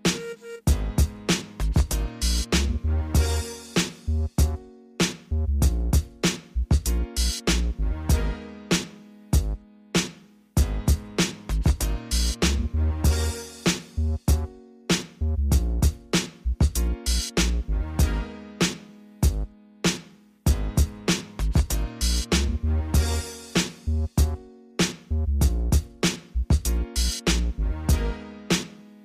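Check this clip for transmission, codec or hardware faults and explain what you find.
Nothing in the clip points to a transmission, codec or hardware fault. There is no moment in the audio that calls for explanation on those grounds.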